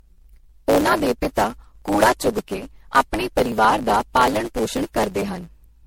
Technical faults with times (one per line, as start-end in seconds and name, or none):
0.00-5.86 block size mismatch (truncated)
0.00-5.86 generation loss
0.06-5.79 periodic USB or driver dropouts